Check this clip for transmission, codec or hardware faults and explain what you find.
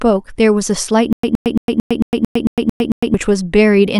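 One fault is present: a stutter with silent gaps in the speech between 1.13 and 3.14 s. A short fragment of about 118 ms plays, then about 106 ms of digital silence, repeating nine times at a steady 224 ms period. The likely cause is a stalled player or stream replaying its last buffered fragment on each retry before running dry, so the real audio for that stretch never arrives. On a waveform it shows as identical blocks separated by flat near-silent lines. A spectrogram shows matching stripes with blank columns between.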